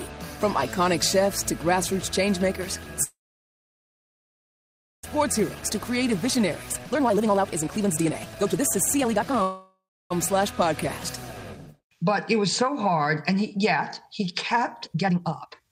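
At 3.03 s the sound stops and a short fading buzz continues the last moment. It then goes silent for about 1.9 s, until 5.05 s. This is a call audio freeze, likely from packets held up in transit so the jitter buffer ran dry. When the audio resumes at the point where it stopped, nothing is lost, but a 2 s gap has been inserted.

From 5.18 s to 9.41 s a jitter buffer speed-up follows. The buffer now holds that extra 2 s of audio. The receiver trims it by cutting many short pitch-period pieces, about 2 s in total. Playback runs at 144% speed. Pitch stays the same, but the sound feels rushed.

At 9.42 s a second freeze begins and lasts until 10.12 s. Its fading fill gives way to silence for about 0.29 s. This is again likely a stall in packet arrival. It adds about 0.68 s of delay and drops nothing.

From 14.86 s to the end, another speed-up runs at 169%. It removes roughly 0.7 s. The sound is noticeably hurried.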